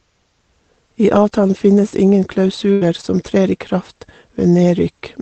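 From 1.15 to 3.69 s, scattered short gaps hit the speech. About three gaps occurred, roughly 120 ms missing in all, and each hole was patched by stretching the preceding sound, heard as brief hiccups.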